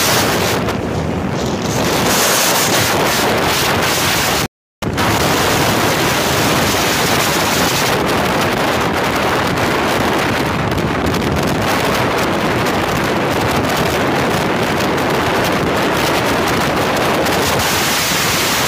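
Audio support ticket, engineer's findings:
Rebuffering stall, 4.46 to 4.82 s. Symptom: sound drops to silence for 0.36 s, then picks up at exactly the point where it stopped, with no skipped material. Component: streaming player's playback buffer. Mechanism: downloaded audio ran out before the next chunk arrived, so playback halted until data caught up. Nothing lost, but about 362 ms of dead air added to the timeline.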